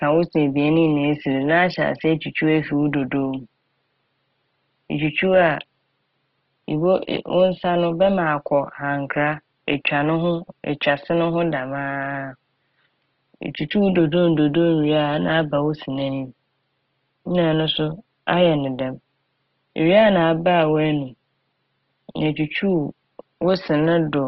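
Across the whole speech clip the sound is rough and grainy, with a noisy texture on voiced tones but little swirling, which is likely Opus compression in its music (CELT) mode at full bandwidth; the damage is plainly audible and fits a low rate near 16 kbps. The faint room noise sits about 51 dB below the speech.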